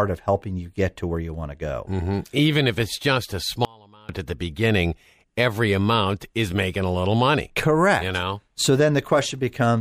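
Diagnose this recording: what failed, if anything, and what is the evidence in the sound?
Dropout to a faint residue at 3.65–4.09 s, after "if it's just a": speech cuts abruptly to leakage about 30 dB down, likely a loose analogue connection.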